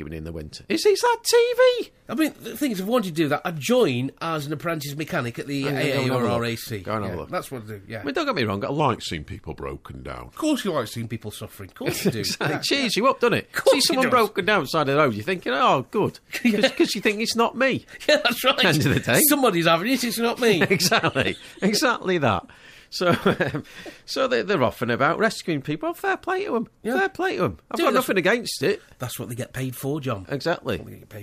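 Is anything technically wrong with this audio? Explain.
Yes. From 8.8 to 11.03 s there is a section at the wrong speed. For just over two seconds the audio turns sluggish and drops about two semitones in pitch, then snaps back to its normal rate and pitch. It is running at 0.89 times its proper speed, and because pitch and timing shift together, the cause is likely a playback or editing clock set to the wrong rate for that stretch, not a deliberate effect.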